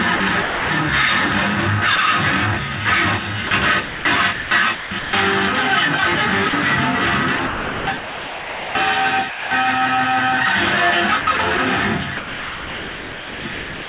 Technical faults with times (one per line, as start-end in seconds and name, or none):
0.16-0.70 sound chopped by the voice detector
1.96-1.98 sound dropped by the voice detector
3.47-5.13 sound chopped by the voice detector
6.49-6.53 sound dropped by the voice detector
7.37-9.51 sound chopped by the voice detector
11.21-13.88 sound chopped by the voice detector